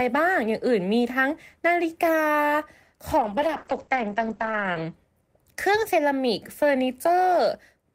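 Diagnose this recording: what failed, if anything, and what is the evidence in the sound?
Call bitrate drop, 3.19–4.99 s: the network forces the encoder from 32 to 9 kbps, and the spectrogram loses everything above 8 kHz, sounding muffled.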